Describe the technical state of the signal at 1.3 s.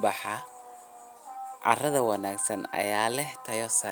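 The signal at 1.3 s is intact, with no audible fault at that moment.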